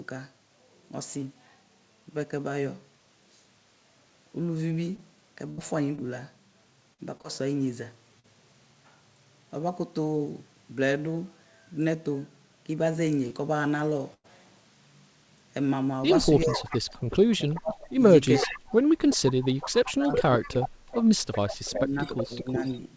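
Between 4.96 and 8.26 s the speech picks up a string of small ticks, smears and hiccups, roughly seven of them, none longer than about 70 ms, while the voice stays clear around them. These are scattered short gaps: packets lost or arriving late here and there, each hole patched by the receiver extending the last bit of sound until real audio resumed.

From 13.28 to 13.32 s there is a single brief smear. That is short concealed packet loss. Around 20 ms of audio never reached the decoder in time, and the receiver filled the hole by carrying the preceding sound forward, from its pitch if voiced or as shaped noise if not, then blending back into the real signal.

At 14.14 to 14.26 s the sound holds as a buzz or fading hiss and then jumps ahead, with about 100 ms of speech simply missing. This burst of packet loss is a run of consecutive packets that were lost or arrived too late. Concealment stretched the last sound and faded it out before the stream resumed further on.

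From 16.55 to 17.75 s and again from 18.33 to 22.64 s, a delayed copy of the voice trails 377 ms behind, about 15 dB below the speech at first and then about 10 dB below. This is echo leak: a far end playing the call through a loudspeaker, likely with an echo canceller that failed to remove everything its microphone picked up, so the residue was sent back.

In four places the talker's voice dips, dulls or breaks into pieces: 16.44 to 16.72 s (down about 15 dB), 17.56 to 18.58 s (down about 30 dB), 19.66 to 20.72 s (down about 25 dB), and 21.62 to 22.84 s (down about 15 dB). This is speech suppressed in double talk, likely caused by the echo canceller being unable to separate the near talker from the loudspeaker echo and turning both down. Throughout the clip, the call path's G.722 coding leaves nothing above 8 kHz.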